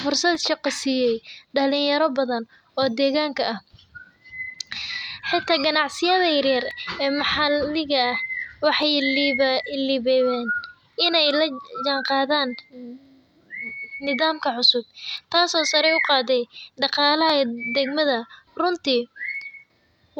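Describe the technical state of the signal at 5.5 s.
Clock drift buffer slips, 0.35 to 19.42 s: regular clicks every 2.12 s, likely two clocks about 150 ppm apart dropping or repeating small sample blocks.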